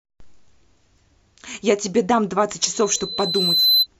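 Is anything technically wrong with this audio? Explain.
Yes, there are two kinds of fault. Overlap between stream segments, at 0.98 s and 2.96 s: overlapping time stamps on the 2-second segments make the player discard real audio, so the speech jumps with a tiny skip.

Loudspeaker feedback squeal, from 2.74 to 3.87 s: the microphone picks up its own loudspeaker, and a 4 kHz tone builds over about a second into a squeal roughly 5 dB above the speech.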